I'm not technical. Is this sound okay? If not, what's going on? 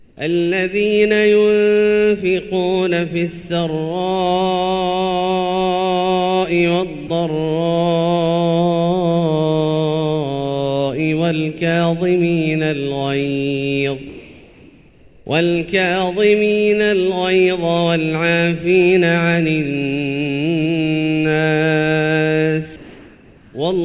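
No. In three places the natural background sound is replaced by a flat, featureless noise, slightly quieter at two of them: from the very start to 0.17 s, from 14.09 to 15.26 s, and from 22.76 to 23.54 s. This is comfort noise in place of the background. The likely cause is the sending end going quiet whenever it hears nothing worth sending. The receiving end then fills those gaps with made-up noise that only roughly imitates the real room.

At 7.07 to 7.1 s, a brief bit of the actual sound vanishes for about 30 milliseconds and is covered by that same smooth filler noise. This is sound dropped by the voice detector. The sender likely judged that moment to be background rather than something worth sending and cut it, so the listener briefly gets synthetic noise instead of the real thing. The audio also has the dull, narrow quality of a phone call, because the call path removes everything above 4 kHz.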